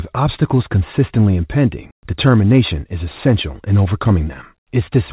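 Nothing is technically wrong with the speech here; it carries the narrow band of a normal call path, with nothing above 4 kHz, which fits G.711 mu-law at 64 kbps.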